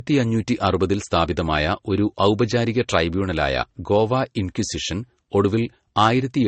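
Throughout, the speech is dull above 8.4 kHz, with smeared, warbling artefacts layered together, likely from transcoding between lossy codecs, which fits a low-bitrate MP3 stage re-encoded as Vorbis.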